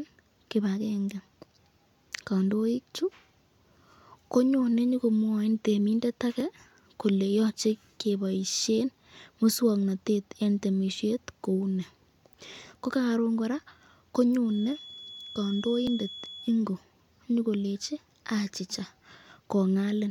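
At 6.40 s the speech breaks and the sound jumps ahead by a few milliseconds. This is likely a dropped buffer (overrun): the hardware overwrote samples before the software read them, so the remaining audio on either side is spliced together without any gap.

From 14.41 to 16.60 s a thin, steady whistle near 3.4 kHz sits about 15 dB below the speech and swells and fades slowly in level. This is a feedback whistle, likely from a loudspeaker-to-microphone loop hovering just at the edge of feedback without running away.

At 15.87 s, inside the whistle, a second, shorter skip loses a millisecond or two. This is another dropped buffer, again likely from samples being overwritten before they were collected.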